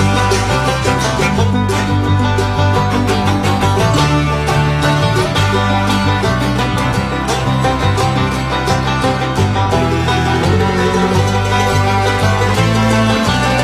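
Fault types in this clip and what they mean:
Nothing stood out as a fault on listening to this audio.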